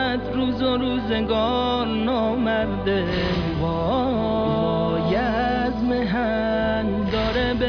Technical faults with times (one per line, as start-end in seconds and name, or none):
none